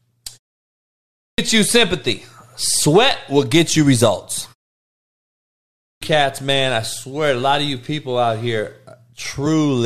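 At 0.82 s, after a 0.52 s pause, the output device is still waking and swallows about 0.56 s of speech, so "you sympathy" starts abruptly. At 5.36 s, after a 0.9 s pause, the same clipped start after a pause cuts about 0.66 s before "man I swear a". This clipping removes actual speech onsets. At 9.45 s, damaged data in a compressed stream makes the decoder misread a frame and lose sync, leaving a brief blip rather than a missing onset.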